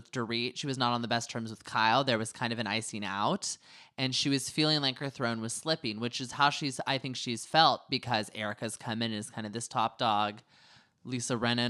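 A speech recording with no technical faults to report.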